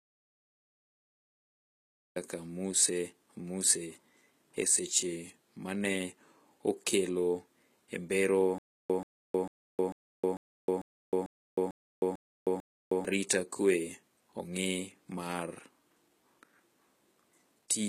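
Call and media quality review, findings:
Treble gritty and lispy throughout, sibilants metallic, high band not tracking the harmonics below it. HE-AAC compression, likely at a low bitrate around 20 kbps: treble rebuilt by band replication from copied lower bands, plainly audible across the crossover.

Audio dropout to silence from clip start to 2.16 s, already under way when the clip opens. Full digital silence, no room tone. Input path probably lost, likely device or link failure, with the encoder writing zeros. Content in that span unrecoverable.

Stutter with silent gaps, 8.58 to 13.05 s. A 134 ms fragment repeats 10 times at a steady 446 ms period, each followed by about 312 ms of digital silence. Player or stream stall, likely replaying the last buffer at each retry. Intervening audio lost.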